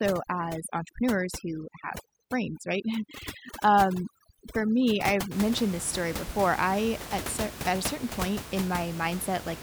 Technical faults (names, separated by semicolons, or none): overdone noise removal